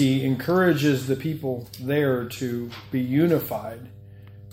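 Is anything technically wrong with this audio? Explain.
Yes, there's mains hum running under the whole clip, from start to finish. It's a steady low tone at 50 Hz, sitting roughly 20 dB below the sound itself. The culprit is the power line leaking into the signal path, typically through a ground loop between connected gear or a transformer sitting too close to a cable or input.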